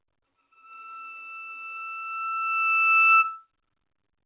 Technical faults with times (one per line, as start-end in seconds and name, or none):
none